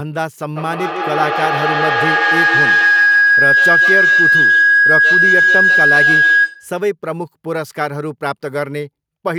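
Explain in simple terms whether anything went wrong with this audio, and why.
From 0.56 to 6.76 s a piercing, high-pitched whine of about 1.5 kHz swells over the speech, ending up louder than it. This is feedback howl: two devices sharing the call kept re-amplifying each other's sound in a loop.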